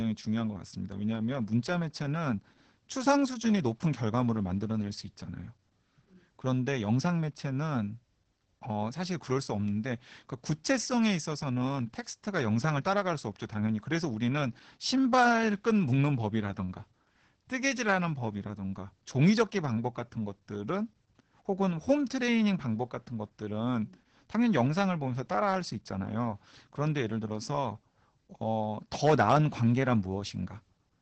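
Throughout, Opus voice compression in SILK mode makes the speech muffled, hoarse and faintly robotic. A spectrogram shows nothing above 8.7 kHz, which fits a bitrate near 10 kbps.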